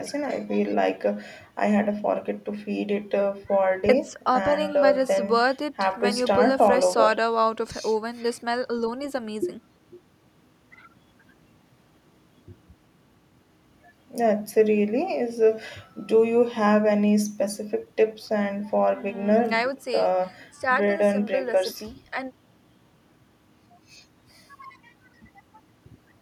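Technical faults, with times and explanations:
No technical faults can be heard in this speech.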